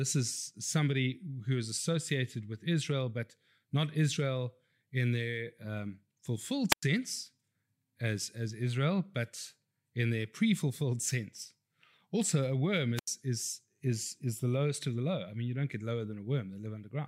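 Speech, with two wireless microphone squelch dropouts: the analogue FM radio link fades long enough for the receiver's squelch to shut the output. Each is a short swell of hiss followed by a hole of near silence. The first runs from 6.70 to 6.83 s, right after "in their um fulfilled", muting for about 99 ms. The second runs from 12.96 to 13.07 s, between "a worm" and "is is is the", muting for about 83 ms.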